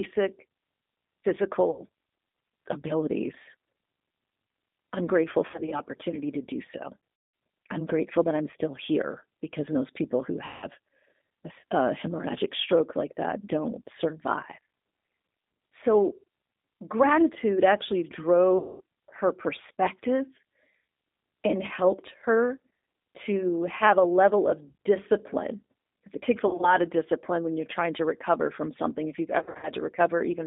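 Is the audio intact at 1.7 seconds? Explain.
No. VoIP packet loss concealed by the speech codec falls between 1.71 and 1.81 s. About 60 ms of audio went missing, which fits three lost packets. The decoder filled the gap by carrying its last pitch and vocal tract settings forward and turning the gain down frame by frame. The result is a stretched remnant that fades. Because each frame builds on the one before, the voice stays weak and smeared for a short while after the stream resumes.

The G.729 codec damage is present at this moment too, as it is throughout. The audio is confined to roughly 200 Hz to 3.7 kHz, which fits an 8 kbit/s G.729A stream. That codec rebuilds speech from a vocal tract filter, a pitch predictor and a few pulses in each 10 ms frame. It gives the voice a plainly audible rough, slightly synthetic quality with nothing above the cut-off.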